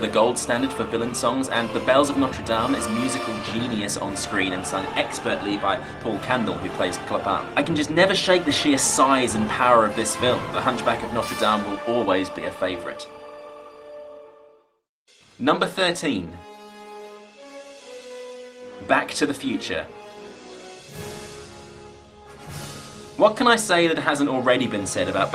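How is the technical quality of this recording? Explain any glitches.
No technical glitches can be heard anywhere in the recording; the signal stays continuous and stable throughout.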